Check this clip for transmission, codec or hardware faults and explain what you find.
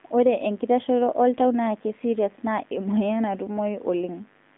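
Two faults run through the whole speech clip: a mains buzz and the damage of an AMR narrowband mobile codec.

Mains buzz, throughout: switching spikes at twice the 50 Hz mains rate leak into the signal path, producing a ladder of harmonics well into the kilohertz range. The result is a steady raspy buzz sitting roughly 35 dB below the speech.

AMR narrowband mobile codec, throughout: the speech has passed through AMR-NB, which samples at 8 kHz and rebuilds the voice from a vocal-tract model driven by sparse pulses. The band runs from about 200 Hz to 3.6 kHz, with nothing above 3.8 kHz, and the synthetic, buzzy coding is plainly audible, which fits a high mode near 10.2 kbps.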